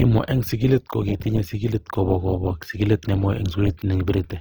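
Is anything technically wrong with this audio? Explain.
Yes. Throughout, the speech sounds rough and grainy, with noisy texture in place of clean detail. This is likely Opus compression: music-mode band filling at a rate that fits about 24 kbps, still reaching about 20 kHz.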